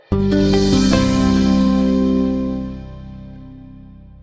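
No technical faults can be heard anywhere in this clip. At no point does anything in the audio stand out as a problem.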